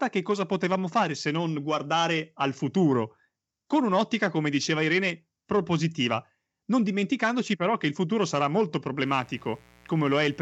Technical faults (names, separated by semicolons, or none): mains buzz